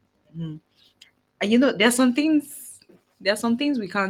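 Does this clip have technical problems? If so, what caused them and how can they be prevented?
No, this clip has no technical problems, so there is nothing to prevent.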